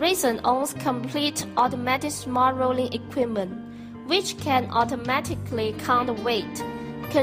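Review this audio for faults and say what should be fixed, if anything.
No technical faults can be heard anywhere in the clip. Nothing needs to be fixed.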